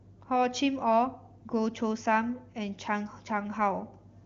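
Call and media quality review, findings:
No findings for this call and media quality review; the speech carries through the AMR wideband (HD Voice) path with its full wideband character.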